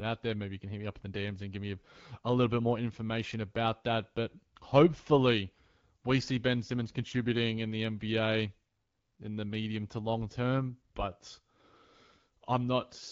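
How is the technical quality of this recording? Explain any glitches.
Nothing stood out on listening to this speech recording; no glitches caught the ear.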